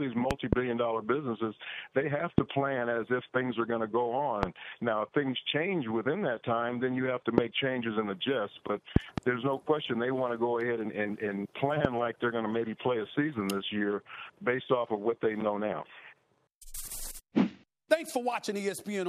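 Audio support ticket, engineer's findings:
Loud pops at 0.31–0.55 s (double), 2.38–2.40 s, 4.43–4.45 s, 7.38–7.40 s, 8.96–9.20 s (double), 11.85–11.87 s. Peaks about 20–25 dB over the sound, which continues underneath. Likely a voltage step from a connector, switch or driver glitch.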